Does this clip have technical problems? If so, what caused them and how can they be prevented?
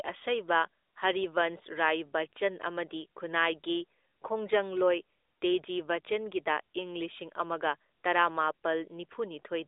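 No, there are no technical problems to report here.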